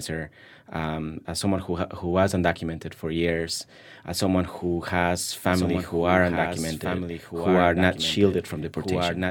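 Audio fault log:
5.30 s to the end, doubled audio track: a second full-band copy of the speech cuts in abruptly, trailing by about a second and a half and sitting a few dB under the original, with no decay or room colour, so it's likely a slower capture path feeding the mix twice.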